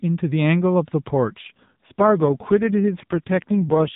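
At 1.28 s an AMR rate drop turns the speech buzzier and synthetic until the end, fitting 4.75 kbps. The spectrogram shows no gap, an unchanged 4 kHz ceiling, and blurrier harmonics.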